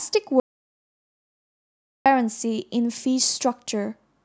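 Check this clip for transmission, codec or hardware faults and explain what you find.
One fault is present. Audio dropout to silence, 0.40 to 2.06 s: the input signal was likely lost while recording continued, writing silence. The speech cuts off abruptly mid-flow, leaving about 1.66 s of total silence with no room tone, then resumes just as suddenly.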